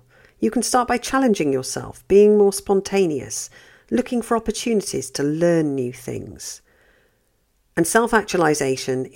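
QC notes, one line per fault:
No faults found in this speech clip. Nothing in the recording calls for a timestamp or a note.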